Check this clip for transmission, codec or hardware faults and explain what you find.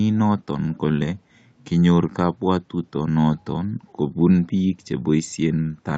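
No faults can be heard.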